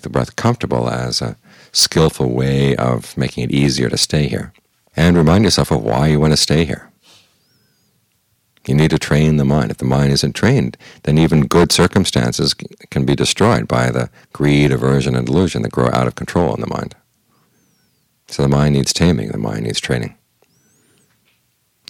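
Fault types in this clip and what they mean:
hard clipping: peaks overran a stage by about 11 dB and were cut flat, giving harsh crackle on a small share of loud moments throughout.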